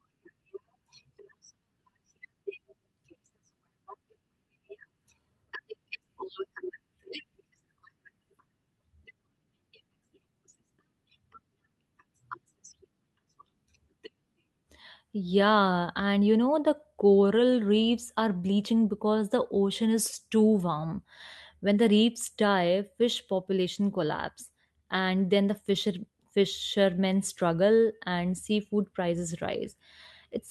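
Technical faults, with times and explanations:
No technical faults are audible anywhere in the speech recording.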